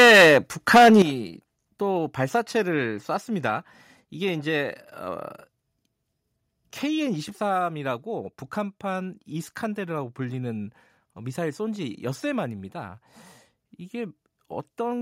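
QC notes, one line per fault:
0.00–0.38 s and 0.74–1.02 s, microphone overload: peaks flatten with a harsh crackling edge, about 9 dB then about 12 dB over, with roughly a third of samples clipped; likely input gain set too high.
1.02 s, microphone volume stepped down: speech and background drop abruptly by about 11 dB right after the second distorted burst, likely software automatic gain lowering the mic input level.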